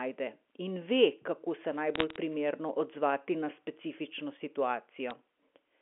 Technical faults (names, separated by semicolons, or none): bit errors on a digital phone line